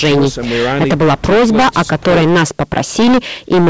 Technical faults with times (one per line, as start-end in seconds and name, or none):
0.00-3.70 hard clipping